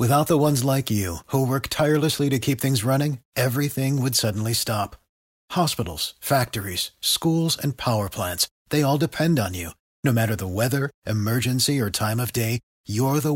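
No technical faults occur at any point in the speech, so there is nothing to describe in time order.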